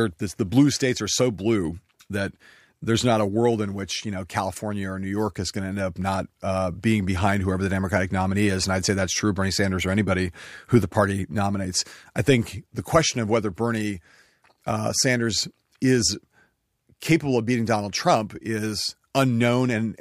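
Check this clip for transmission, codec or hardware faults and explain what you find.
One fault runs through the whole clip: a block size mismatch, truncated type. The speech carries a steady buzz at 43.1 Hz from start to finish. One processing stage writes blocks longer than the next stage reads. The tail of every block is discarded. Each cut leaves a jump in the waveform, and those jumps repeat at the block rate. The rate points to blocks of 1024 samples. Pace and pitch stay at normal speed, 1.0 times.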